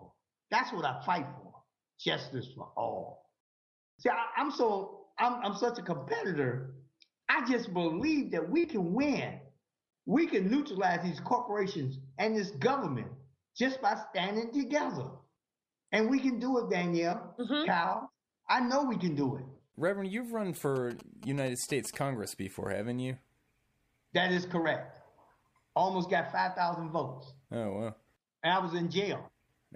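From 20.76 to 21.95 s the audio picks up GSM signalling bursts, a galloping dit-dit-dit of short 217 Hz buzzes roughly 15 dB below the main sound, as the circuitry rectifies a nearby 2G phone's radio pulses. Unlike steady mains hum, it arrives in stop-start clusters.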